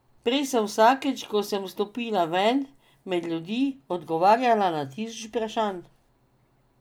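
Speech, with nothing technically wrong in it.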